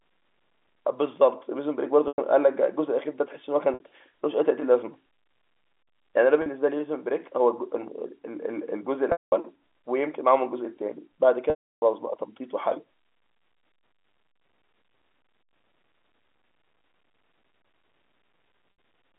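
Packet loss with pitch repetition occurs six times in this speech: at 2.08 s (100 ms gap), 3.74 s (60 ms), 6.42 s (40 ms), 9.12 s (200 ms), 11.5 s (320 ms) and 18.72 s (60 ms). The gap lengths fit runs of 20 ms packets going missing. Each time, the receiver covers the hole by looping the last pitch cycle. The shorter gaps sound like a briefly held, buzzy tone. The gaps at 9.12 s and 11.5 s outlast that fill, so the buzz fades to silence before the speech cross-fades back in. All of this sits within a narrow telephone band.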